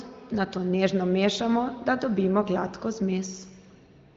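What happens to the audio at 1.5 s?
Nothing goes wrong at 1.5 s: the speech there comes through intact, carried by the AMR wideband (HD Voice) codec at a high rate, with any coding damage faint at most.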